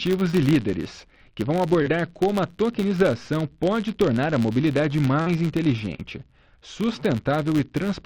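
A filter restarted on every block runs from start to finish. The filter loses its stored state at each block boundary and begins every block from silence, so each block opens with a small transient. The blocks arrive 100 times per second, which points to 10 ms blocks, and the result is a 100 Hz buzz of regular ticks whose loudness rises and falls with the level of the sound.

Short concealed packet loss occurs four times: at 0.31 to 0.45 s, 1.82 to 1.88 s, 5.22 to 5.28 s and 5.96 to 6.00 s. In each case a chunk of audio (20, 40, 40 and 20 ms respectively) failed to reach the decoder in time. The receiver covered each gap by extending the preceding sound, then faded back into the real audio. The patches last about 15, 36, 42 and 21 ms. Each is heard as a brief smear or wobble. The first stretch also carries roughly 15 ms of added time.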